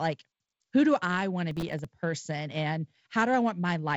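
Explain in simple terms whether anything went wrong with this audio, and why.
From 1.51 to 1.85 s the speech breaks into a gritty crackle: processor overload crackle. The processor fell behind and missed around twenty deadlines for tiny audio chunks, each a millisecond or two long. Every missed chunk played as a hard-edged gap of silence.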